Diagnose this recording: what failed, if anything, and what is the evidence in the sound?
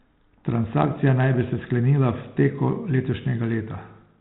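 Nothing failed in this recording.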